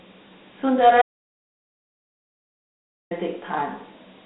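From start to finish the speech carries Dialogic VOX ADPCM coding. The 4-bit adaptive quantiser leaves plainly audible grit and a hiss trailing each phrase. At 32 kbps this fits 8,000 samples a second, with the band held to roughly 150 Hz–3.5 kHz and nothing above 3.9 kHz.

At 1.02 s the audio drops out to silence and returns at 3.11 s, losing about 2.09 s. The gap is silent with no room tone, most likely from the input being lost while the recorder kept writing empty samples.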